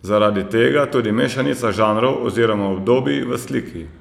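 No technical faults are audible.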